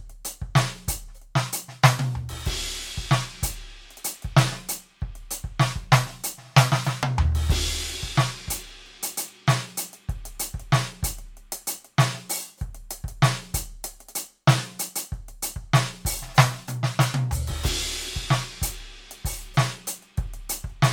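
No faults can be heard.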